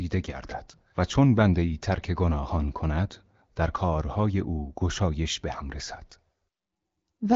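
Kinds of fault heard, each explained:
No kinds of fault are heard in this speech.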